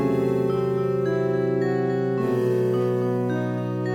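The whole sound carries plainly audible MP3 compression across its roughly 4 seconds. Quiet detail swirls in and out with a watery texture. Bright, noisy parts chirp metallically. The likely cause is a bitrate near 64 kbps.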